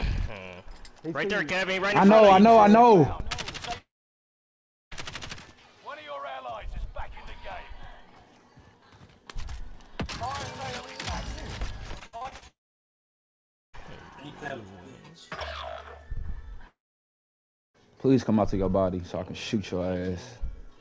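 At 3.78 s the sound breaks into a brief fading buzz and then about a second of near silence, returning at 4.93 s with that stretch simply gone. The same happens from 12.47 to 13.75 s and from 16.67 to 17.76 s, each with roughly a second of dead air. These are long network dropouts, likely caused by audio failing to arrive at all: the receiver stretches the last sound for a moment, gives up, and resumes further on without the lost portion.

Just before the second dropout, from 11.99 to 12.43 s, the sound turns choppy, stuttering through six short holes, the longest 57 ms. This is repeated packet loss producing a robotic sound. Packets kept going missing, and each gap was patched by extending the previous sound, covering almost half that span with synthetic fill. Throughout, the sound carries nothing above 8 kHz, which fits the G.722 call codec at 64 kbps on this path.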